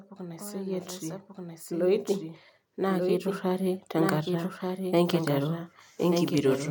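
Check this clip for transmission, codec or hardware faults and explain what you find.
Two faults stand out: a delayed second copy of the speech running under the whole clip, and two stretches where automatic gain pulls the level upward.

Doubled audio track, throughout: the speech is heard twice, with a full-band copy trailing the original by roughly a second and sitting around 5 dB quieter. The copy has no reverberant tail or room colouring, so it isn't an acoustic echo. It points to the same signal being mixed in a second time, likely through a slower capture path or an edit that left two misaligned copies.

Automatic gain rising, 0.15 to 2.15 s and 2.76 to 5.72 s: the gain control judged the input too quiet and raised its gain step by step, by 7 dB over the first two seconds and by 5 dB over the later stretch of about three seconds. The speech and the background noise swell together rather than the speech alone getting louder, which marks this as gain applied to the whole signal.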